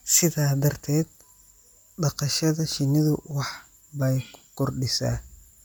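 A speech clip with plainly audible codec damage throughout: the upper range sounds breathy and grainy, likely from Bluetooth LC3 compression, fitting 10 ms frames near 48 kbps. A spectrogram shows speckled, noise-filled high bands and nothing above 20.2 kHz.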